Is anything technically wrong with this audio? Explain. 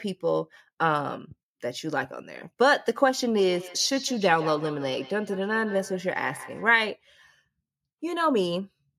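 Yes. From 3.41 to 6.86 s the speech comes round again in quick repeats, roughly every 150 ms, each thinner and more ringing, peaking at about -16 dB below the speech. This is feedback echo between two devices: one device replays the other's microphone signal, which that microphone recaptures, beyond either echo canceller's reach.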